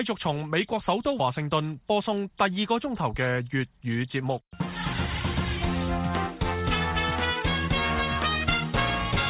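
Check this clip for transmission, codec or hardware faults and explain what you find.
Nothing stands out here; the audio comes across without any transmission, codec or hardware trouble that I can pick up on.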